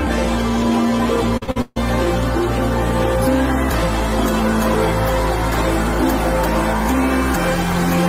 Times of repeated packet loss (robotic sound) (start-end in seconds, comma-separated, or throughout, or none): 1.37-1.78